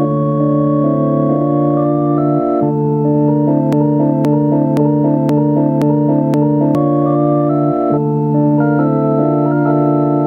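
From 3.73 to 6.75 s a broken-record loop takes over: one 0.52 s fragment plays six times back to back, likely because the stream stalled and resent its last buffer. The waveform and spectrogram show identical repeating blocks, and the intended audio is lost.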